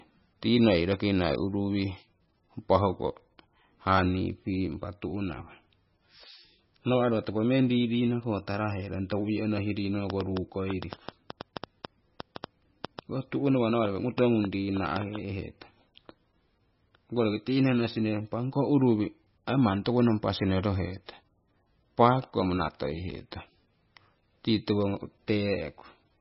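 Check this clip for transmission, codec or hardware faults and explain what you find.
Two faults are audible: heavy codec damage across the whole recording, and a burst of clicking in the middle.

MP3 compression is the likely cause of the damage heard throughout. Nothing remains above 5.6 kHz, and the speech sounds watery and swirly, which fits a bitrate of around 18 kbps. Starved of bits, the encoder chopped the treble at a fixed point and dropped weak frequency lines that flicker on and off between frames. That fixed ceiling and the warbling texture separate it from a simple low-pass filter, which would dull the sound without the swirl.

A train of clicks runs from 10.10 to 15.17 s, about twenty pulses at roughly 4.6 per second, spaced irregularly and standing well above the speech. Interference from nearby equipment or a faulty connection is the likely source, injecting pulses of much the same shape. 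They tick through pauses as well as speech, so they come from outside the signal rather than from the codec.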